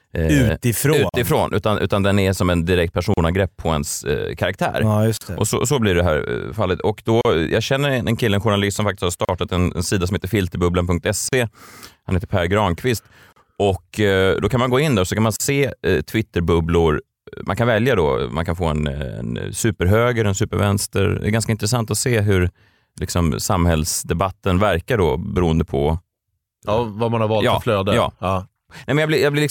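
Gaps at a join of encoded pieces fall at 1.09, 3.14, 5.17, 7.21, 9.25, 11.29, 13.33 and 15.36 s, one every 2.0 s. The first lasts 44 ms and the rest 38 ms each, for example between "är som en direkt" and "på ens eh karaktär", and between "journalist som faktiskt har" and "en en sida som". The speech was encoded in two-second pieces and joined untrimmed. Each piece's start-up delay and padded final frame stay in, so the speech drops into brief silence with smeared edges and then resumes exactly where it stopped.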